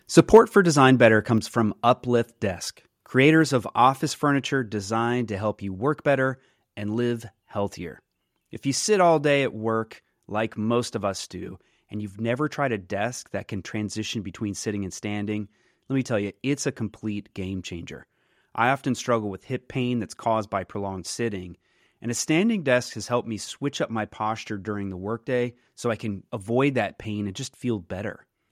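A short speech recording opens with microphone overload from 0.18 to 0.39 s. The loudest peaks are driven about 4 dB past the converter's ceiling, and their flattened tops give the loudest syllables a harsh, crackly edge. The likely cause is input gain set too high. Unlike codec distortion or a noisy cable, the grit appears only on the loudest peaks and only at these moments, and a small fraction of the waveform is affected. At 0.37 s, still inside that distorted burst, the microphone volume is stepped down. Speech and background drop together by about 3 dB in a single instant, with no gradual fade. That is likely the call software reacting to the clipping by lowering the device's input gain. An automatic gain control would ride the level smoothly up and down. A single step like this, coming right after a clipped peak, points to a one-off volume correction.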